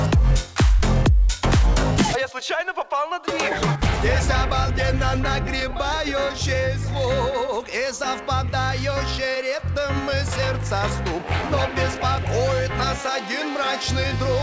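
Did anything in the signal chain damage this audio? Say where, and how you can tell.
No, nothing in the chain damaged this audio: it came through a call path whose bandwidth stops at 8 kHz, which fits a wideband G.722 link, and the level, continuity and timing all hold steady throughout.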